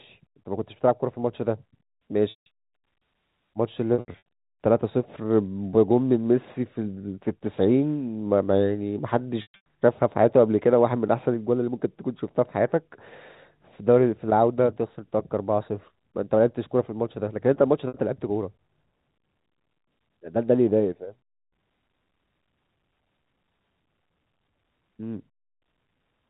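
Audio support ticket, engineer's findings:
Packet loss with pitch repetition, receiver-side concealment, at 2.30–2.46 s (160 ms), 3.94–4.25 s (gaps scattered, longest 80 ms), 9.42–9.66 s (longest run 120 ms) and 17.88 s (60 ms). Gaps fit 20 ms packets. The last pitch period is held as a buzzy tone and fades out, unlike a plain dropout's abrupt silence. G.711 band limit at 4 kHz throughout.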